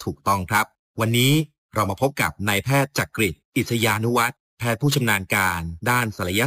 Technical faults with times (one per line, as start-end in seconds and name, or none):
0.00-6.46 imaging from sample-and-hold upsampling